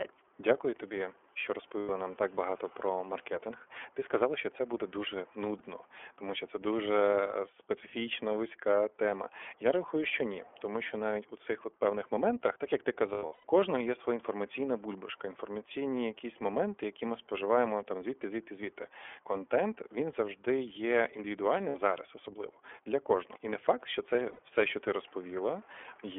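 Throughout, the speech carries iLBC codec damage: a telephone band from 300 Hz to 3.4 kHz, with a plainly rough, synthetic edge. This fits 30 ms frames at around 13.3 kbps. On a spectrogram, energy stops sharply at 3.4 kHz with nothing above.

Lost iLBC frames appear at 1.79–1.90 s (90 ms), 5.58 s (30 ms), 13.14–13.45 s (scattered across 300 ms, longest run about a tenth of a second), 21.69–21.76 s and 24.33–24.40 s (60 ms each). Each gap sounds like a brief held, buzzy vowel as the decoder repeats the last pitch cycle with noise, then the speech recovers at once. These show as smeared, flat harmonic stripes and a regular, repetitive waveform.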